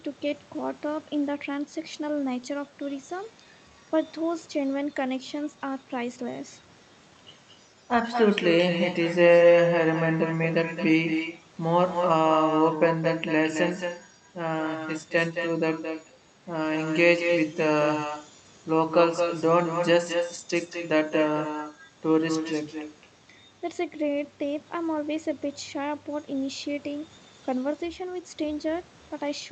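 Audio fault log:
throughout, echo with no canceller: every phrase is followed around a fifth of a second later by a copy about 6 dB quieter and thinner, the far end's loudspeaker output re-entering its microphone and returning across the network with nothing cancelling it.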